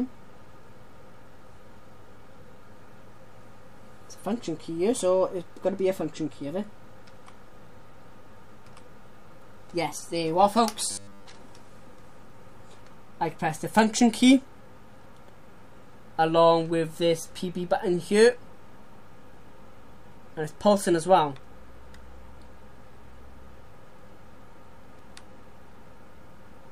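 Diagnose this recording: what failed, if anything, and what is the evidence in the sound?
Between 10.91 and 11.26 s the sound turns into a rigid, metallic buzz pitched at 100 Hz. This is robotic sound from repeated short buffers, likely a driver or buffer underrun. A slice of about 10 ms was replayed repeatedly, replacing most of the real audio.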